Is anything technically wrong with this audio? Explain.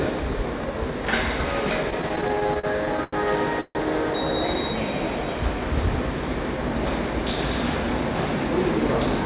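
Yes. There are two timing faults in the sound, heard through a narrowband call path with nothing above 4 kHz, which fits G.711.

From 1.9 to 3.15 s there are repeated stalls (stutter): fifteen short gaps, the longest 87 ms, filling about a fifth of that span. Packets arrived late, the jitter buffer kept emptying, and the receiver stretched the last sound each time, so the audio drags and stutters.

From 3.61 to 3.77 s there is a call audio freeze lasting 144 ms. The last sound is held and fades, ending in about 40 ms of silence before the audio resumes where it stopped. The likely cause is packets held up in transit, which left the jitter buffer empty.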